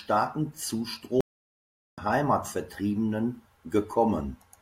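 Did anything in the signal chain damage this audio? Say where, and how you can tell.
Yes, at the playback stage. The speech cuts out completely at 1.21 s and stays silent until 1.98 s, a gap of about 0.77 s, then carries on. That dead stop partway through, with no fade or noise, is a playback stall. The player most likely ran dry of buffered data, or its output thread got blocked, so nothing reached the output until it caught up again.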